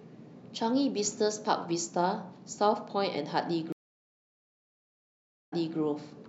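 A speech clip with a stream reconnect from 3.72 s to 5.78 s: about 1.77 s of silence, after which playback resumes 0.29 s earlier than where it stopped. That replayed stretch distinguishes it from a simple dropout, which loses material rather than repeating it.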